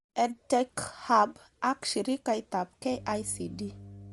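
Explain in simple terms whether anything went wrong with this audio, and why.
Two things went wrong. Throughout the recording the speech sounds grainy and breathy at the top, and nothing is heard above about 11.6 kHz. That points to Bluetooth LC3 compression, likely from a wireless link, rather than simple muffling, because the highs are thinned and noisy rather than smoothly dulled.

From 2.91 s, just after "ak shirikaitab", to the end, a steady low mains hum at 50 Hz sits fairly audibly under the speech. It is a constant pitched drone, not a hiss or rumble, which is how a ground loop or nearby transformer sounds.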